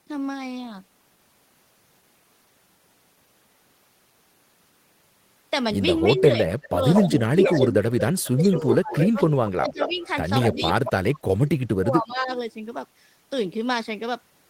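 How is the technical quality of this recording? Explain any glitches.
The middle of the recording is where the trouble is: from about 6.0 s to 12.3 s the speech keeps getting squashed, and a delayed copy of it leaks back in several times.

Speech suppressed in double talk shows up three times, from 6.03 to 9.18 s, from 9.49 to 10.0 s, and from 10.54 to 12.31 s. The talker's level sinks, at worst by roughly 30 dB in the first stretch, about 20 dB in the second and about 35 dB in the third, adding up to a second or more of chopped-out speech each time in the longer two. The likely cause is an echo canceller that couldn't tell the near talker apart from loudspeaker echo while both sides were talking, so it pulled everything down.

Echo leak appears from 6.64 to 7.59 s, 8.42 to 10.07 s, and 10.41 to 10.92 s. Each time you hear a ghost of the speech trailing by 225 ms, sitting only about 5 dB under the main speech in the first and last stretches and around 10 dB under in the middle one. 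That's likely a loudspeaker-side echo canceller that didn't fully remove what its microphone picked up, so part of the playback got sent back down the line.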